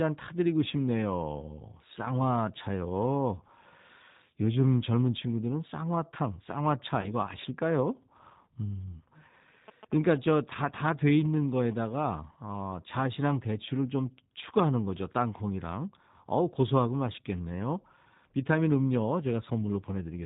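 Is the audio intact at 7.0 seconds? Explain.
No. From 7.01 to 7.15 s there is VoIP packet loss concealed by the speech codec. The gap sounds like about 20 ms of missing audio, roughly two frames. The decoder filled it by repeating its last pitch and vocal tract filter at falling gain. This produces a brief buzzy or noisy smear that fades, and the sound stays weak for a while after packets resume. On a spectrogram, this shows as flat, repeated harmonic striations or smeared noise that dim. In the waveform, the amplitude sags and recovers slowly.

The G.729 codec also affects this moment, as it does the whole clip. At 8 kbit/s it rebuilds the speech from a filter, a pitch predictor and a few pulses per subframe. The result is plainly rough and synthetic. A spectrogram shows nothing above 4 kHz and blurred harmonics.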